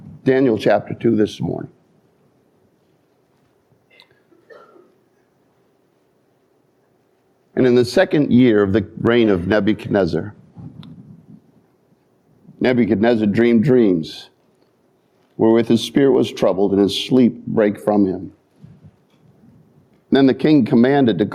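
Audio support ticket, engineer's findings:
Gain pumping, present throughout. Level swing around 10 dB. Loud and soft parts squashed close together. Likely cause: input gain set far too high, with a fast limiter or compressor clamping each peak.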